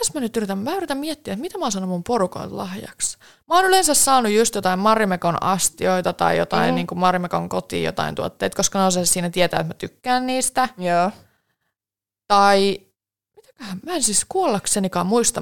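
No technical faults are audible.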